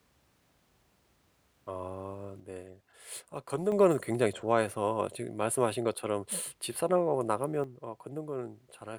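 At 2.4 s the level falls by about 6 dB in a single step. Speech and background noise drop together. It returns at 3.72 s. The same drop recurs at 7.64 s and lasts to the end. This sudden gain jump likely comes from a digital gain change applied without a ramp.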